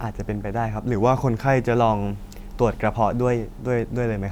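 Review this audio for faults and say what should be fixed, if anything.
From 0.95 to 1.75 s the speech slows by about 6% and drops roughly a semitone (about 111 cents), then snaps back to normal. That's likely a drift correction step, where clock-matching software yanked the playback rate in one go to rebalance its buffer. To prevent it, have the resampler spread drift corrections gradually in small increments rather than applying them as a single abrupt rate change.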